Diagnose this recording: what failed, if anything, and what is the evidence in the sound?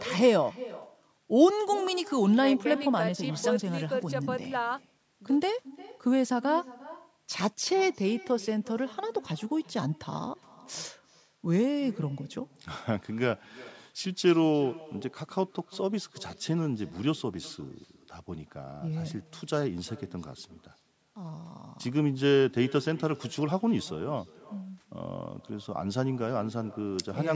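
The failure is in call processing at the far end: echo with no canceller. Throughout the speech, each phrase returns roughly 0.4 s later, about 20 dB quieter and thinner. A loudspeaker fed its microphone, and nothing removed that copy before the network round trip.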